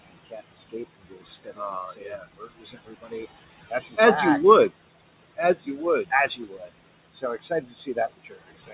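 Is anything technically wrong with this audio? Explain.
Yes. Two related problems come from the noise suppressor in this speech clip.

Noise suppressor artifacts run through the whole clip. The suppressor treats steady room noise as something to remove and lowers those frequency bands frame by frame, by about 20 dB. The room noise sits about 16 dB below the speech. So the background drops away in pauses and comes back under the talking.

Speech cut by the noise suppressor happens four times. From 0.06 to 3.23 s, quiet parts drop by up to about 21 dB, for roughly one and a half seconds in total. From 3.69 to 3.98 s, just before "as back you would", about 0.2 s dips by up to about 19 dB. From 5.37 to 6.7 s, about half a second loses up to about 13 dB. From 7.13 s to the end, drops reach about 20 dB. The suppressor mistakes soft speech for noise and turns it down too. Those sounds come across swallowed or faint. 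The audio also has nothing above 4 kHz, which fits a narrowband call codec such as G.711.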